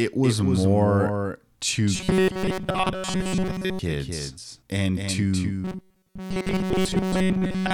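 From the start to the end, the speech has a doubled audio track: a second full-band copy trails roughly a third of a second behind, a few decibels quieter than the original, with no decay or room colour. This is likely the same signal picked up again through a slower path and mixed back in. It sounds like a hard, dry slapback echo on every syllable. On a waveform, each burst of speech has a smaller twin following it at that fixed offset. On a spectrogram, every harmonic pattern appears twice, the later copy fainter but otherwise identical.

From 1.95 to 3.79 s, just after "it was more to", and again from 5.64 s to the end at 7.73 s, after "and to", the speech becomes robotic from repeated short buffers. Fresh audio is likely arriving too seldom, so the playback keeps re-sending its last few milliseconds while most of the real sound is skipped. The loop length fits a buffer of about 5.3 ms, which imposes a rigid 188 Hz metallic buzz that only loosely tracks the speech. 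On a spectrogram, these stretches show flat, evenly spaced harmonic lines at multiples of 188 Hz in place of the natural pitch contours. Zoomed in on the waveform, the same short cycle repeats over and over.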